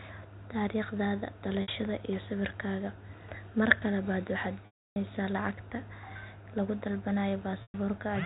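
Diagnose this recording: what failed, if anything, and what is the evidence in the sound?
The network stage failed: packet loss with pitch repetition interrupts the speech three times, at 1.62 to 1.68 s (60 ms), 4.66 to 4.96 s (300 ms) and 7.62 to 7.74 s (120 ms). The gap lengths fit 20 ms packets. The receiver repeated the last pitch period to bridge each gap. The 60 ms gap sounds like a briefly held, buzzy tone. In the longer gaps the repetition fades into silence, and the speech returns through a short cross-fade. A buffer underrun or hard dropout would instead cut abruptly or click. The G.711 telephone band limit under 4 kHz is audible throughout.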